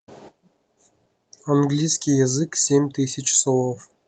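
No technical faults can be heard anywhere in the speech recording, which stays continuous and intact throughout.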